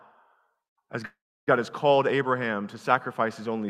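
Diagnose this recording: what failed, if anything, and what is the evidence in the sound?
A call audio freeze at the network stage interrupts the speech from 1.05 to 1.49 s. The last sound smears into a fading buzz or hiss, then about 0.3 s of silence, before "has called" resumes where it stopped, likely from delayed packets draining the jitter buffer. Unlike packet loss, nothing is missing; roughly 0.4 s of delay is inserted.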